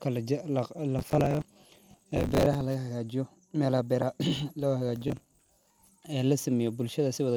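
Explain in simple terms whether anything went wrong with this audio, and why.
Two bursts of processor overload crackle tear through the speech, from 0.99 to 2.61 s and from 5.08 to 5.87 s. The processor fell behind on its tiny audio chunks, around 10 ms each. Dozens arrived late and were patched with stale sound, so you hear gritty crackling.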